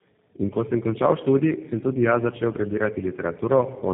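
From start to finish the speech carries tandem speech coding. The roughness, muffling and warble point to three low-rate speech codecs in a row, such as AMR-NB, GSM full rate and G.729A, each decoding and recoding the last one's damage. The speech sounds rough, noisy, muffled and warbly. On a spectrogram, energy stops flat at 3.7 kHz, and harmonics and formant bands look smeared and patchy rather than crisp.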